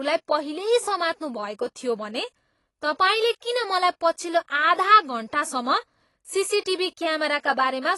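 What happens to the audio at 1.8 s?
At 1.8 s the speech carries AAC compression damage, as it does for the whole clip. Nothing is heard above about 11.5 kHz, so the top end sounds dull. The coder likely ran at a low rate, one that fits about 32 kbps. At that rate it quantises frequency lines coarsely and drops detail it judges inaudible. The result is plainly audible. Sibilants sound fizzy, and sustained sounds take on a smeared, warbling texture.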